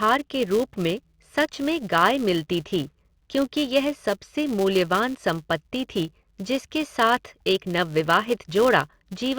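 Speech runs through the whole clip with a buzz at 200 Hz riding on it, the mark of a filter restarted on every block: each 5 ms block starts from silence, leaving a small transient that tracks the speech level. A waveform shows evenly spaced ticks, and a spectrogram shows harmonic lines at 200 Hz multiples.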